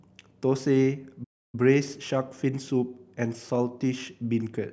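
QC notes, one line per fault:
1.23–1.55 s, playback stall: the player likely ran short of buffered data or had its output thread held up, so nothing reached the output for about 295 ms until it caught up again. In the speech this is heard as an abrupt drop to silence in the middle of the flow rather than a natural pause, and the gap is long enough to register clearly as a hitch before the audio picks up again.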